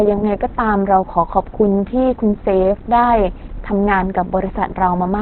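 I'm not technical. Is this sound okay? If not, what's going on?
No, the speech sounds muffled and hoarse from start to finish, with nothing above about 4.2 kHz. That points to heavy Opus compression, likely squeezed into its narrowband speech mode, which throws away the crisp upper range and leaves a rough, phone-like tone.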